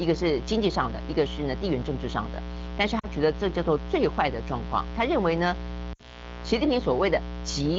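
A mains buzz runs under the whole clip. It sits roughly 10 dB below the speech. Its harmonics stack on a 60 Hz base. Sharp switching spikes from a dimmer, rectifier or missing shield get in twice per cycle, giving a steady, raspy buzz.

Lost AMR speech frames hit from 2.99 to 3.06 s, about 40 ms of missing audio, which fits two 20 ms frames. Radio errors corrupted them. The AMR wideband decoder repeated its last good settings with falling gain, so the sound drops toward near silence. Speech then returns weak or rough. A second loss covers 5.93 to 6.29 s. Its 60 ms gap fits three frames. The same dropout and uneven recovery follow. Around both gaps, the HD Voice band is clear.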